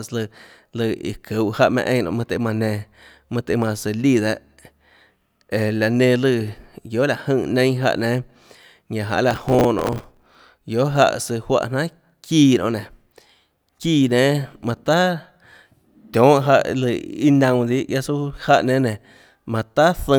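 From 9.31 to 10.45 s, the speech carries a burst of processor overload crackle. The processor could not finish its small audio buffers on time, roughly 5 ms each. It missed dozens of deadlines again and again over this stretch. Each miss replayed a scrap of old audio with hard edges. Strung together, these scraps form a gritty, tearing crackle over the speech. It stops once the load eases after 10.45 s.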